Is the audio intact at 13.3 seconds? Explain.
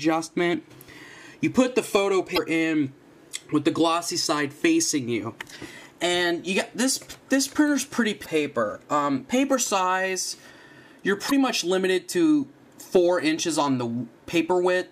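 Yes, the audio is intact at 13.3 seconds, with no fault audible at that moment.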